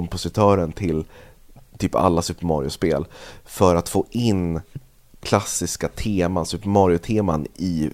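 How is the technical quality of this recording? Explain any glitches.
No technical glitches can be heard in this recording.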